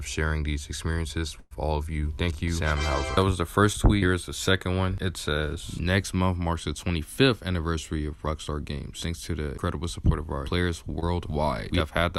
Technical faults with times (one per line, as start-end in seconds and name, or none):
1.39-1.53 burst of packet loss
3.73-3.76 short concealed packet loss
11.00-11.04 short concealed packet loss